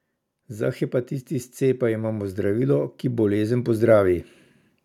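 From 0.47 s to 4.25 s the whole recording slowly swells. The speech and the background noise behind it grow louder together, ending about 8 dB above where they started, with no sudden step along the way. This is automatic gain rising. The automatic gain control judged the input too quiet and kept turning its gain up over nearly four seconds, so everything it passed, noise included, was lifted by the same creeping amount.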